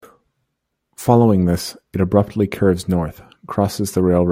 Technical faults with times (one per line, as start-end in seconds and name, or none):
none